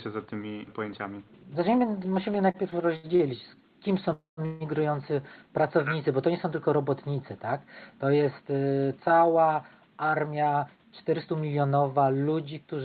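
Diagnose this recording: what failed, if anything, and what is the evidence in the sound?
Between 2.51 and 3.22 s, just before "kim są", the speech stutters through four short stalls totalling 155 ms, the longest 75 ms, so roughly a fifth of that stretch is filler. That's repeated stalls (stutter) at the jitter buffer: packets kept turning up late, the buffer kept running dry, and the receiver stretched the last sound each time before moving on. Nothing's missing; it just drags. The Opus path and its roughly 8 kHz top end sit underneath all this.

Right after, there's a call audio freeze, twice. From 4.13 to 4.40 s the sound is held for 249 ms, trailing into about 140 ms of silence. Then, just after "kim są", from 4.45 to 4.63 s it's held again for 150 ms, this time without going silent. The likely culprit is packets held up on the network, emptying the buffer while the receiver filled in until they arrived. 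Each hold adds delay without losing any audio.

Then the jitter buffer speed-up kicks in. From 9.90 to 11.64 s, right after "jest y cała", everything runs at about 111% speed at the same pitch, which sounds noticeably hurried. The buffer had piled up more audio than it aims for. To claw the delay back, the receiver trimmed many tiny pitch-period-sized pieces in a row, roughly a fifth of a second in total.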